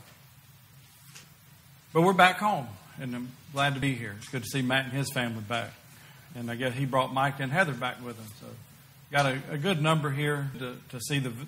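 Damaged data in a compressed stream at 3.82, 6.35 and 10.54 s: corrupted bytes make the decoder misread frames and lose sync, leaving brief glitches.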